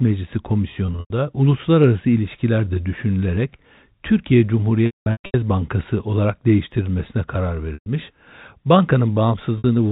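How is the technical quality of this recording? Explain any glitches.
The speech has four dropouts from packet loss with pitch repetition, at 0.86 to 1.10 s, 4.86 to 5.34 s, 7.74 to 7.86 s and 9.58 to 9.64 s. It sits inside narrowband G.711 telephone coding, cut off at 4 kHz with only faint quantisation noise.

At each gap the receiver loops the last pitch period and fades it out. The brief gaps at 7.74 and 9.58 s sound like a held, buzzy tone. The 4.86 s stretch, with runs up to 200 ms, fades to silence. A spectrogram shows frozen harmonic stripes tapering to blank. The waveform shows identical repeating cycles decaying to flat.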